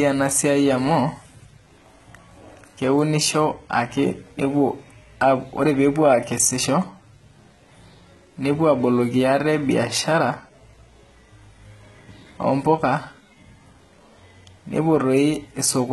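From start to finish the speech carries heavy damage consistent with HE-AAC compression, likely at a very low bitrate in the region of 16 kbps. The lower band sounds coded directly, while the treble is synthesised by copying lower spectral content upward under a coarse envelope. The result is a treble that stays bright but does not belong to the voice: s sounds come out gritty and lispy, with a metallic edge above the crossover.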